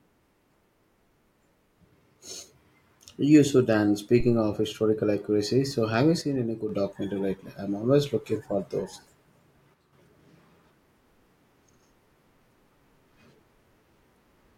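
At 4.20 to 4.46 s, between "you should and" and "historical accuracy so have", a phantom power thump: a supply switching on or off a live input sends a deep thump through the coupling capacitors, dying away in about 57 ms. Unlike a plosive or handling bump, it has no connection to the speech.

At 6.22 to 6.69 s, after "accuracy so have you", and again at 9.74 to 9.93 s, the level drops abruptly by about 6 dB and then returns. This is likely one channel dropping out before the mono sum. The instant, fixed step distinguishes it from a fade or gain ride.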